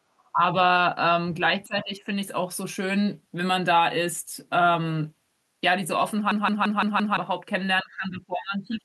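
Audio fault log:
0.19–0.30 s, other side's voice leaking through: a faint second voice, about 40 dB below the talker, slips in briefly. The likely cause is loudspeaker playback of the far end reaching the microphone, with the echo canceller leaving a residue.
0.32–0.41 s, speech suppressed in double talk: the talker's level sinks by about 20 dB for roughly a tenth of a second. Both sides were likely speaking together, so the echo canceller could not separate them and turned the talker down.
1.65–2.10 s, speech suppressed in double talk: a longer dip of about 15 dB over roughly 0.4 s. This is likely the canceller again mistaking overlapping far-end sound for echo and attenuating everything.
6.32–7.17 s, system hang loop: one 0.17 s piece of audio repeats exactly five times, a stutter at 5.86 Hz that fits an 8192-sample buffer. The hardware kept cycling its ring buffer while the system froze, and about a second of audio is lost.
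7.83–8.84 s, speech suppressed in double talk: the final second is pushed down by up to about 25 dB, so the talker fades. The likely cause is the echo canceller suppressing hard during overlapping talk.
8.70–8.80 s, other side's voice leaking through: a brief scrap of the far-end voice rises to about 25 dB below the talker, louder than the earlier leak. This likely comes from uncancelled loudspeaker echo at the microphone.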